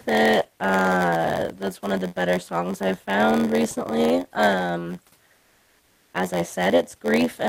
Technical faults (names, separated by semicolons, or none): block size mismatch (padded); comfort noise in place of the background